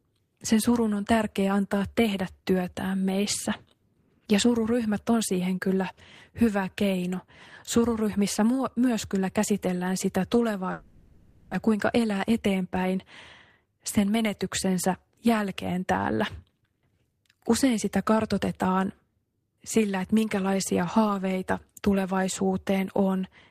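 At 10.71 s, after "myös kyllä käsitellään sitä", the speech turns into a fading buzz until 11.55 s. About 0.6 s of speech is lost. This is likely a long network dropout.

Jitter buffer speed-up follows, at 11.67 to 12.93 s and 13.58 to 14.43 s. Pitch-period slices are cut, about 0.17 s in total. Speech runs about 8 to 9% faster and sounds hurried.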